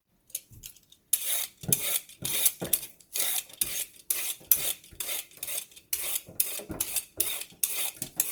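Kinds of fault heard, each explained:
Opus compression: The audio was likely squeezed through the Opus codec in its music mode at a low rate, around 24 kbps. With too few bits, the encoder keeps each band's overall energy but fills in the detail with folded or noise-like content. The bandwidth stays full, reaching about 20.2 kHz, but tonal parts of the sound come out plainly rough, grainy and noisy rather than swirling or hollow.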